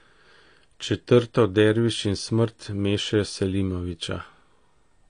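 From start to finish the speech sounds dull and smeared, with nothing above 9.7 kHz, likely from AAC compression at a low bitrate that fits about 32 kbps. Unlike a plain low-pass filter, the damage also warbles and fizzes within the remaining band.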